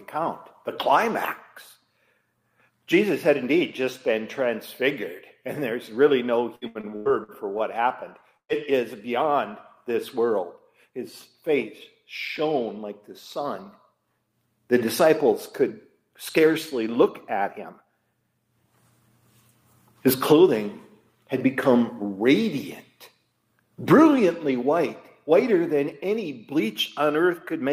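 From 6.55 to 7.62 s, repeated packet loss gives robotic sound. Six gaps, the longest 91 ms, are patched by extending prior audio, concealing 29% of the span and missing 180 ms. At 8.37 to 8.52 s, a burst of packet loss replaces about 120 ms with a fading held continuation, then silence, before audio resumes further on. From 20.06 to 20.49 s, a jitter buffer speed-up trims pitch periods, roughly 40 ms in all, so the sound runs about 9% fast at unchanged pitch.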